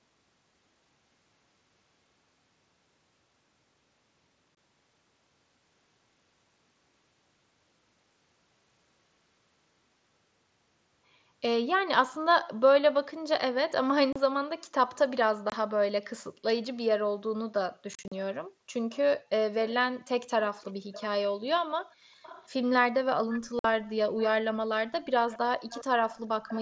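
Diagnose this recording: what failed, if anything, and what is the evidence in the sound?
Unconcealed Bluetooth headset packet loss on the headset-to-phone link: gaps at 4.55 s (22.5 ms), 14.13 s (30 ms), 15.50 s (22.5 ms) and 23.59 s (52.5 ms), plus a scattered burst at 17.94–18.12 s. Each hole cuts in sharply and can click. Waveforms show flat-lined gaps. Spectrograms show blank vertical slots edged by clicks. Lengths fit multiples of 7.5 ms mSBC frames.

Echo leak at call-processing stage, likely a far-end loudspeaker whose echo canceller let residue through: a copy trailing 409 ms behind, about 15–25 dB down, at 18.90, 19.67, 20.40–21.03, 22.22–22.69, 23.33–23.49, 25.00–25.38 and 25.70 s to the end. Spectrogram shows faint harmonics repeated 0.41 s later.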